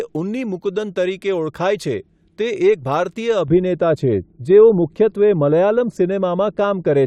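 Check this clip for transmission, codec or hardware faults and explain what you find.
One fault is present: the speech turns dull and muffled from 3.48 s to the end of the clip, losing its crispness as if heard through a cloth. This is de-emphasis applied wrongly. A treble-cutting filter meant to reverse pre-emphasis was applied where none existed, or a second time. The response slopes away smoothly toward high frequencies, reaching about 11 dB down at 10 kHz relative to 1 kHz, which dulls consonants and removes air.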